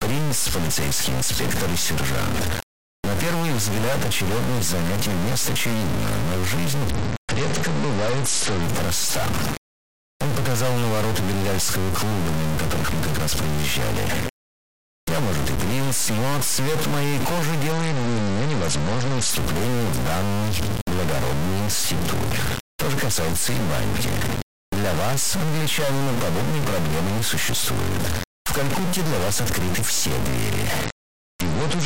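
A stuck bit, likely one converter data line held at a fixed value, puts distortion over the whole recording and fills the pauses with steady noise. A Bluetooth SBC bit pool drop, the kind a congested link forces, occurs from 6.91 to 8.63 s, 17.72 to 19.30 s, and 30.85 s to the end. Each time the treble dulls and gritty quantisation noise rises, consistent with the bit pool falling from about 31 to 10, near 77 kbps.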